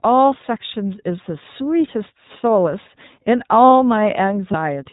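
From the start the speech comes through the iLBC codec. Everything above 4 kHz is gone, and there's a plainly audible rough, slightly synthetic edge, because each short frame's excitation is coded on its own. The sound fits the 15.2 kbps mode with 20 ms frames.

At 4.52 s there are lost iLBC frames, a 20 ms gap that points to a single dropped packet. The decoder filled it by repeating the last pitch cycle with some noise mixed in, so you hear a brief held, faintly buzzy vowel. By 4.55 s the voice is right again.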